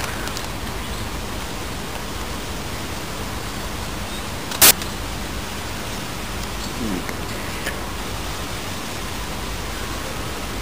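From 4.62 to 4.71 s, samples built from the wrong bytes: misassembled sample words push the fast-changing low bits to the top, producing a 90 ms burst of loud, harsh broadband noise.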